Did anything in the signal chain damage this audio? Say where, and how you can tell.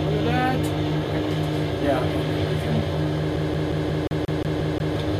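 Yes, at playback: from 3.36 to 4.96 s a CD stuck on one turn repeats the same 178 ms chunk nine times, muting briefly at each laser jump back.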